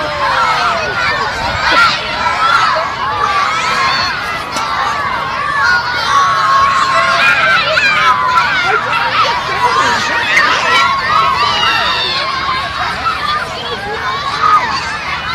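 Hard clipping runs through the whole clip. The audio was pushed about 6 dB past what some stage in the chain could pass, so the loudest peaks get sliced flat. Only a small fraction of the samples, well under one percent, actually hit the ceiling, so what you hear is brittle crackle and grit on the peaks rather than constant fuzz. Those squared-off tops spray extra harmonics high up the spectrum, which is where that edge comes from.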